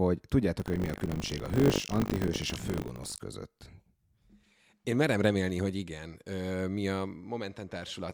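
From 0.58 to 3.19 s the speech carries buffer tearing: writer and reader have slipped, so a small slice of each 20 ms buffer replays audio from about 70 ms earlier. This yields a rattling 50 Hz buzz that, unlike mains hum, vanishes whenever the speech pauses.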